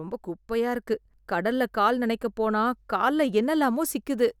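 At 0.87 s there's a sudden gain jump: speech and background noise both step up about 5 dB and stay there, likely a gain setting applied without any ramp.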